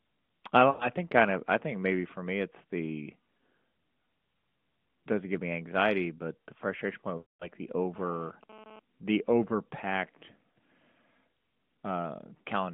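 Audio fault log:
0.70–0.89 s and 7.18–7.49 s, lost AMR speech frames: the sound smears into a drawn-out hold and then sags toward silence. Both dropouts fit a run of lost 20 ms frames. The first loses about 100 ms and the second about 220 ms. The decoder keeps repeating the last good pitch and vocal-tract settings while stepping the gain down. The longer gap fades fully before the audio returns, weak or rough, over the narrowband AMR band.
7.96–8.79 s, GSM phone buzz: a hard, raspy buzz at 217 Hz with a dense stack of harmonics, about 21 dB below the signal and unrelated to it. It comes from a nearby 2G handset transmitting in bursts 217 times a second, with the audio circuitry rectifying those radio pulses. Here the buzz stutters on and off rather than holding steady, which points to the phone doing a data transfer rather than carrying a call.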